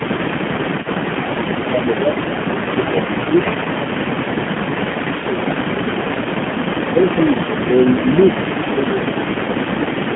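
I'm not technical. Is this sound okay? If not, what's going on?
No, it isn't. Three separate problems affect it.

AMR narrowband mobile codec: the audio went through the speech compression used on older mobile phone networks. That system throws away everything above about 3.4 kHz and below about 150 Hz, then rebuilds the voice from a simplified model using very little data. Across the whole 10 seconds, the voice sounds boxy and muffled, like an old phone call. It also has a clearly buzzy, slightly artificial edge.

Echo leak: the other end of the call was probably on a loudspeaker, and its echo canceller likely failed to remove everything its microphone picked up. That leftover sound got sent back. A faint, delayed copy of the talker trails behind the original. In the first tenth of a second it lags by about 0.23 s. From 0.47 s to the end it lags by about 0.28 s.

Speech suppressed in double talk: when both sides spoke at once, the echo canceller likely couldn't tell the talker apart from the echo, so it turned everything down. 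The voice sinks noticeably or partly drops out at 0.19–0.96 s, 1.32–3.37 s, 6.93–7.15 s and 8.71–10.12 s. There is also a brief, slight dip at 8.00–8.07 s.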